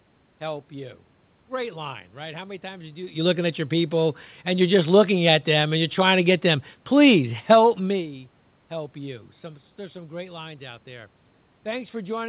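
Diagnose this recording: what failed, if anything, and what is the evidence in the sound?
Nothing failed: the level shifts around 3 s and 8 s are the talker moving relative to the microphone, the background is room noise, and the band stopping near 4 kHz fits a narrowband G.711 call path.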